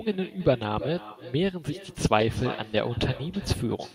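Speech throughout carries echo with no canceller: a quieter copy about 16 dB down trails each phrase by roughly a third of a second, showing as faint repeats after every burst.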